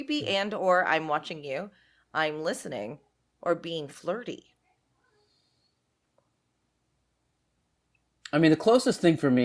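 No technical faults can be heard anywhere in the recording; the signal stays continuous and steady throughout.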